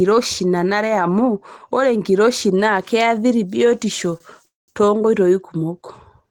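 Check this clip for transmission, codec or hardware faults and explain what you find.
Two transmission faults occur in this speech clip, both shortly before "too nkoitoi".

From 4.18 to 4.22 s there is a short stall from a late packet. A packet arrived after it was due, the jitter buffer emptied, and the receiver held the last sound for about 24 ms until the packet turned up, then resumed at the same point. The result is a brief stretched, faintly buzzy sound with nothing lost. Unlike a freeze, it is too short to fade into silence.

From 4.46 to 4.70 s there is a call audio freeze, likely caused by packets held up in transit that drained the jitter buffer. The last sound is continued as a fading buzz, then drops to silence for about 180 ms, roughly 222 ms of filled time in all, before the audio picks up where it stopped. No speech is skipped, which separates this from packet loss, where content vanishes rather than being delayed.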